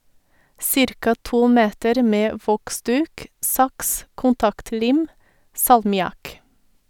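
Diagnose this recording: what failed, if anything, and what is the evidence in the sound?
Nothing failed; no stage shows any fault.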